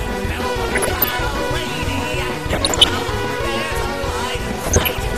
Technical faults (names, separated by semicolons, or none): MP2 compression; DAB burbling